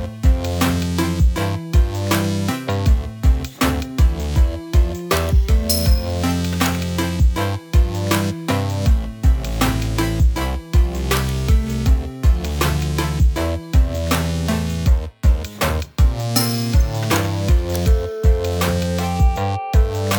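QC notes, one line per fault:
No faults heard anywhere in this clip.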